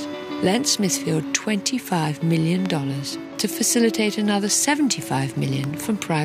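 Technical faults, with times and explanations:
2.66–2.68 s and 5.64–5.66 s, loud pop: a single sharp pop each time, jumping roughly 10 dB above the sound, which carries straight on underneath. It's likely a brief voltage spike from a switch, plug, static or driver glitch, smoothed into a quick pulse by the downstream circuitry.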